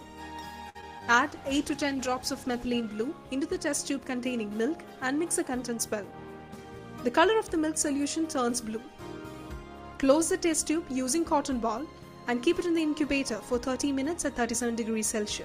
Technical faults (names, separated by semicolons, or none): short stall from a late packet; short concealed packet loss; call bitrate drop; jitter buffer speed-up